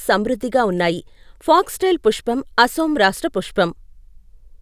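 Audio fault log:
No faults can be heard anywhere in this speech recording. Nothing in it calls for an entry in the log.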